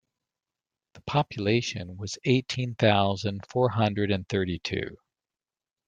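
No technical faults can be heard.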